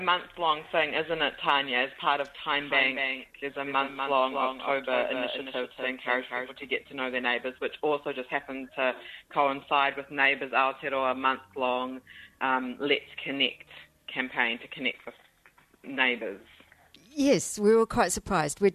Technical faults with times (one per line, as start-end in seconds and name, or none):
2.58-6.76 doubled audio track